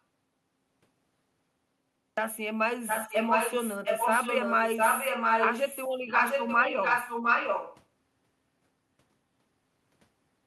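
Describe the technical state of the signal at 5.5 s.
At 5.5 s the speech carries an echo leak, running from 2.87 to 5.95 s. A delayed copy arrives about 0.71 s late, roughly as loud as the original. The likely cause is a far-end loudspeaker whose echo canceller let its microphone pickup through.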